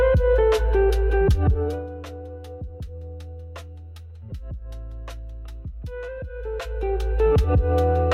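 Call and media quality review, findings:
Nothing to flag here; had a good listen and there's no fault to report on this one.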